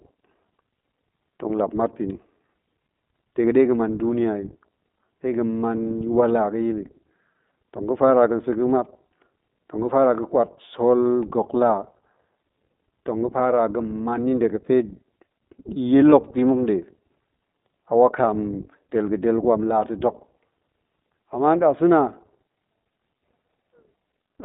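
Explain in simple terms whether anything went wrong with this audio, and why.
The speech sounds thin, muffled and slightly rough throughout. That is the iLBC codec, a phone-call coder that keeps only sound between 200 Hz and 3.7 kHz.

Around 16.10 to 16.14 s, the voice briefly turns into a short, buzzy held sound, then snaps back. That is a lost iLBC frame: the decoder filled the gap of about 20 ms by repeating the last bit of voice.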